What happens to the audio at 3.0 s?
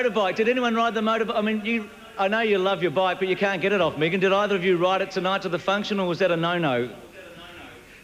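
Nothing goes wrong at 3.0 s; the audio runs through that moment intact, with no dropout, click or other break.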